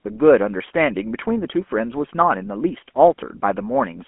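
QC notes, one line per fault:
Throughout, GSM full-rate codec: the sound is confined to a telephone band of roughly 200 Hz to 3.4 kHz, with nothing above 3.7 kHz. The regular-pulse excitation, which keeps only a sparse subset of samples, leaves a plainly audible buzzy, gravelly roughness consistent with 13 kbit/s full-rate GSM.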